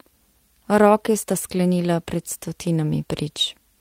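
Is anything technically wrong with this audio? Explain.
No, nothing technically wrong can be heard here.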